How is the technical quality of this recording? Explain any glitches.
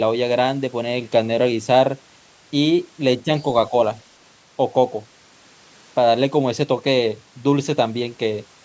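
One short glitch occurs at 3.23 to 3.3 s. For about 70 ms the speech level drops by roughly 10 dB, leaving a brief dip. The likely cause is speech suppressed in double talk: with both ends talking, the echo canceller attenuated the near talker along with the echo. On a waveform the envelope pinches in there. A spectrogram shows a faint vertical band up to the 8 kHz ceiling set by the call microphone processing.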